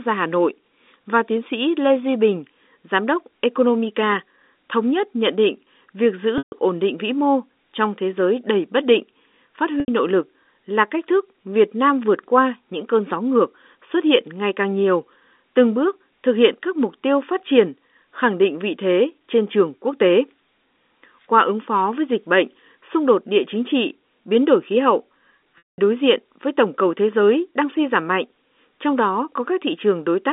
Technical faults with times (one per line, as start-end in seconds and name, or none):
6.38-6.52 packet loss with pitch repetition
9.80-9.88 packet loss with pitch repetition
25.58-25.78 packet loss with pitch repetition